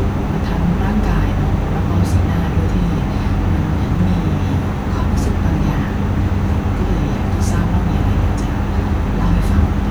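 Speech recording, no technical faults audible anywhere in the clip.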